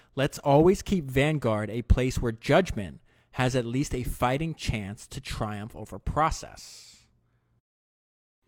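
No technical faults can be heard anywhere in the speech. There is nothing in it that needs a timestamp.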